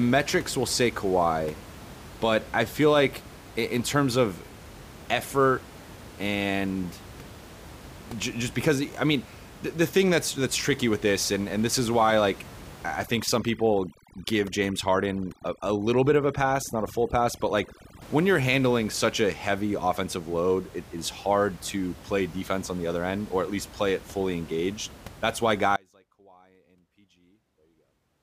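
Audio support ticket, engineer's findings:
Overdone noise removal, 13.05 to 18.02 s, after "is why like I", before "when you're handling such": denoiser set too aggressive, gating bands near the noise floor. Background breaks up into twinkling specks. Spectrogram: ragged, holed harmonics.

Audio dropout to a faint residue, 25.76 s to end: signal cuts abruptly, only a faint trace remaining, around 30 dB down. Likely an upstream source loss with the downstream path still live. Waveform: sharp step to a near-flat line.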